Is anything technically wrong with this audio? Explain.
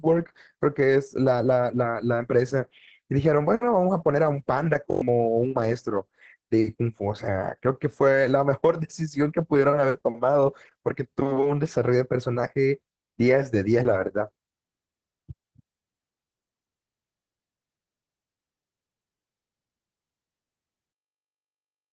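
Yes, there are three faults.

Throughout, heavy Opus voice compression at 10 kbps in SILK mode leaves the speech muffled, hoarse and slightly robotic. A spectrogram shows nothing above 8 kHz and smeared, coarse harmonics.

From 4.91 to 5.01 s, a system hang loop repeats one 21.33 ms chunk five times. That fits a 1024-sample buffer being replayed while the system froze. It sounds like a 46.9 Hz buzz, and roughly a tenth of a second of audio is lost. The waveform shows identical repeating blocks.

From 20.92 s to the end, the level drops by about 32 dB and the speech nearly vanishes. The likely cause is one channel inverted, so the two channels cancel when summed to mono. The waveform collapses almost flat.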